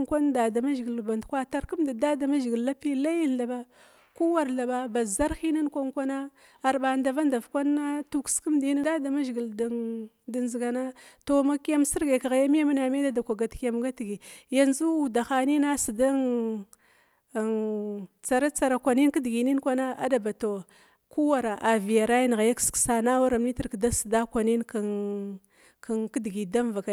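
Speech recording with no audible technical faults.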